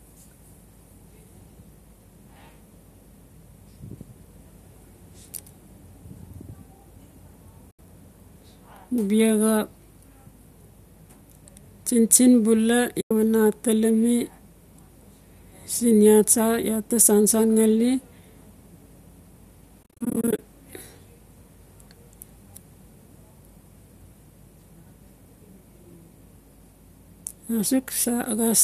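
At 7.71 and 13.01 s, then scattered across 19.83 to 20.39 s, AAC frame loss with muting punches soft-faded silent gaps of 80, 100 and 300 ms into the speech.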